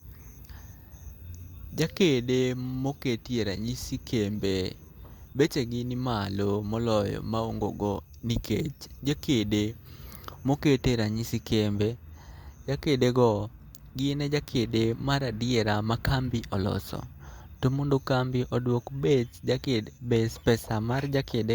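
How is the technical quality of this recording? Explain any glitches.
The recording has no technical faults or glitches to report, and the signal holds steady throughout the speech.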